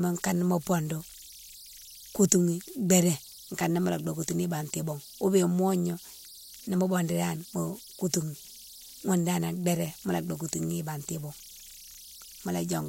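Throughout, converter idle tones whistle near 5 kHz, about 22 dB below the speech: an undithered delta-sigma stage cycling on small inputs, unlike steady hum, shifting with offset.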